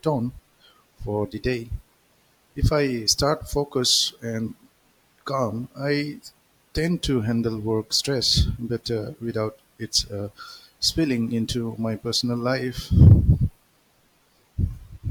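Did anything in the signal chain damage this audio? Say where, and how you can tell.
Yes. Hard clipping at 13.01 to 13.13 s, just after "into my personal life". The speech peaks overran full scale by about 2 dB at the converter or a gain stage feeding it. Their tops were sheared flat, adding high harmonics heard as a brief crackle on that loud moment.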